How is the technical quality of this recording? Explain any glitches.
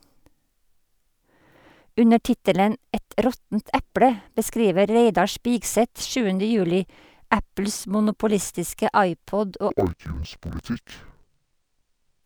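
The recording breaks down in its last few seconds, from 9.70 s to 12.24 s, because of interleaved audio read as planar. Each block of alternating left and right samples, which fits a 1024-sample block of about 21 ms, is split in half and each half is treated as one channel, so both play at half speed. The speech drops an octave, sounds doubled, and chops at roughly 47 Hz.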